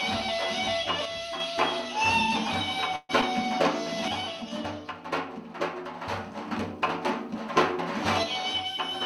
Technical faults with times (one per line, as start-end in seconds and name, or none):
1.05-1.40 one channel drops out
2.96-3.11 call audio freeze
3.21-3.24 short concealed packet loss
4.08-6.51 one channel drops out
8.23-9.06 one channel drops out